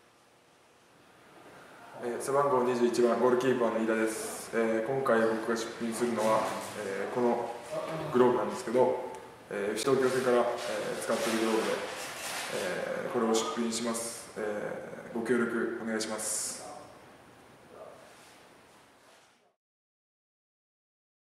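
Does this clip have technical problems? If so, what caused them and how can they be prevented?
Yes. At 9.83 s there is a CD skip: a knock or a surface flaw pushed the laser onto another turn of the disc's spiral, so the player muted for around 10 ms and resumed from a different point in the audio, heard as a small tick followed by an abrupt jump in the sound. On a waveform this shows as a tiny flat gap with mismatched material on either side, and on a spectrogram as a thin vertical line with a hard discontinuity. Cleaning the disc and isolating the player from bumps or vibration, or ripping with an error-correcting extractor, prevents it.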